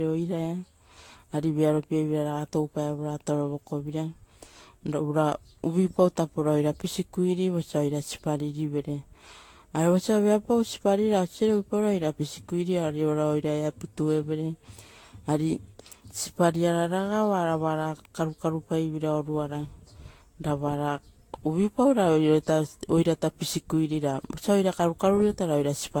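Throughout the speech, generation loss is likely: the audio seems to have been re-encoded around seven times with a lossy codec resembling Vorbis near 70 kbit/s. Each pass quantises afresh, so the sound turns swirly, hollow and smeared, attacks blur, and nothing remains above 19.2 kHz.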